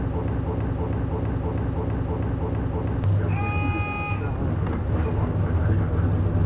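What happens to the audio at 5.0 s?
Nothing goes wrong at 5.0 s. The sound carries on intact, band-limited below 4 kHz as the G.711 call path leaves it.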